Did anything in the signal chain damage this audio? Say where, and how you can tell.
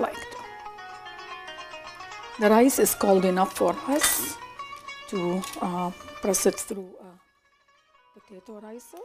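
No, nothing damaged it.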